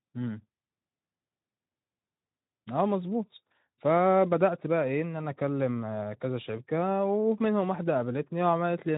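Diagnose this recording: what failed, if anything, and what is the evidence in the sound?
Nothing failed in this recording.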